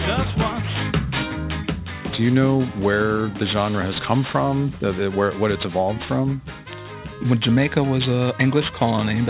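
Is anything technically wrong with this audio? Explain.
Yes. Aliasing runs through the whole clip. The high end sounds gritty and metallic. Sibilant-like and bright content turns harsh, and stray tones appear at pitches that don't belong to the original sound. These spurious components sit roughly 15 dB below the wanted signal. The spectrum runs hard up to about 4 kHz and stops there. That edge points to a downsample from 44.1 kHz to 8 kHz without an anti-aliasing filter, so energy above 4 kHz mirrored back below it.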